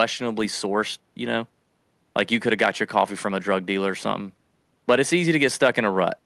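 Nothing stood out on listening to this speech recording, which was carried over a WebRTC call path.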